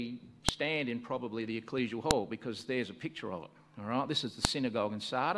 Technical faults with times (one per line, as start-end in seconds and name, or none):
0.49 file header played as audio
2.11 file header played as audio
4.45 file header played as audio